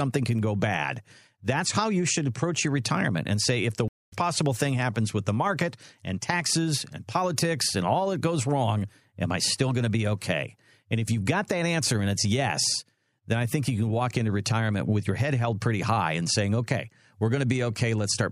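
At 3.88 s, just after "and say if the", a stream reconnect interrupts the speech. The connection dropped, the player went silent for 234 ms, then restarted with a fresh decoder mid-stream. When audio returns at 4.13 s with "possible thing happens with", it has jumped roughly a fifth of a second ahead, so a fragment is missing. A waveform shows a flat gap, then a short fade-in from the new decoder's first frame. On a spectrogram it is a blank vertical band.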